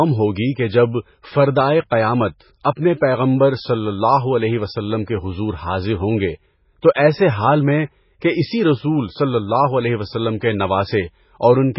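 Speech throughout carries heavy damage from what is likely MP3 compression at a very low bitrate, around 16 kbps. Nothing survives above 5.5 kHz, so a spectrogram shows a flat ceiling there, with speckled holes beneath where weak frequency lines drop in and out, giving a watery, swirly texture. At 1.9 s, just after "کہ جب فردائے", there is pre-echo: the quantisation noise meant for a sharp attack spreads about 15 ms ahead of it, heard as a brief hiss that softens the onset and seen on the waveform as a faint smear rising before the transient.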